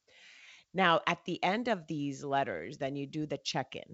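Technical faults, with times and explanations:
No technical faults can be heard in this speech clip.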